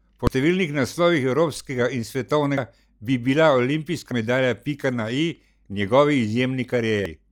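At 0.27, 2.58, 4.11 and 7.06 s, brief glitches break into the speech: damaged data in a compressed stream. Each time the decoder misreads corrupted frames and briefly loses sync.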